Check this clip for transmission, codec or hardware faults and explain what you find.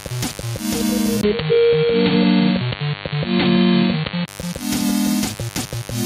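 Two faults are audible: a mains buzz under the whole clip, and a stretch where the sound goes dull after the input appears to change devices.

A steady, raspy buzz sits beneath the sound from start to finish, fairly prominent at only some 15 dB below it. This is mains buzz at 50 Hz: switching spikes from a dimmer, rectifier or unshielded lead enter the signal path twice per mains cycle, so the interference carries a dense ladder of 50 Hz harmonics up into the kilohertz range. That spread of harmonics gives it the rasp rather than a pure hum.

From 1.21 s to 4.28 s the sound turns dull and boxy. A brief 20 ms gap marks the change, the level shifts by a few decibels, and a new noise floor appears, faint at roughly 35 dB down. At 4.28 s the full brightness returns. The likely cause is the input being switched to a poorer device mid-recording. A different microphone or a headset's call profile passes a narrower band and brings its own tone, gain and background noise.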